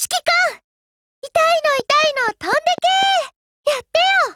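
From 1.80 to 3.04 s, a regular train of clicks at 4.1 per second ticks over the sound, likely from interference or a faulty connection, showing as evenly spaced waveform spikes and thin vertical spectrogram lines.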